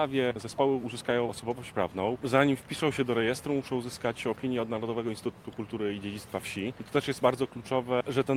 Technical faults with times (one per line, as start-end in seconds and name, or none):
none